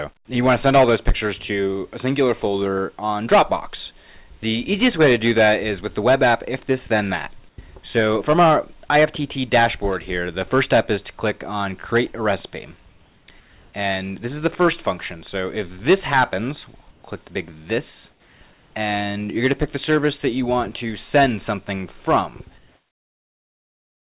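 From 7.49 to 7.58 s the sound is dropped by the voice detector. It gives way to steady hiss for about 90 ms, likely because a quiet tail was misjudged as background. Unlike a plain dropout, the gap holds noise, not silence.

From 9.62 to 10.42 s a loudspeaker feedback squeal rises as a single 5.4 kHz tone. It swells over roughly a third of a second to sit slightly above the sound. It is a fixed pitch, not broadband noise.

Comfort noise in place of the background fills the pauses at 12.89–13.28, 13.40–13.73, 16.91–17.03, 18.11–18.41 and 18.53–18.74 s, and from 22.58 s to the end, likely from discontinuous transmission. The real background turns to smooth, featureless hiss within about 4 dB of its level.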